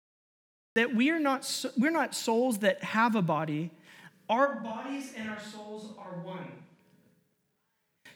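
The recording of this speech clip began late, so the audio holds digital silence until 0.76 s and then cuts straight into speech already under way. This is a cut-off start: the first sound enters mid-syllable with no natural attack or fade-in, as though the capture switched on partway through an utterance. Later, the signal from the close microphone likely dropped out and a microphone farther from the talker took over, a switch to a distant microphone lasting from 4.47 s to 6.78 s. Both transitions are abrupt. Across that stretch the voice turns roomy and hollow and loses low-end weight, the level falls by roughly 10 dB, and room noise rises to about 35 dB below the speech. At 6.78 s the close, fuller sound returns at once.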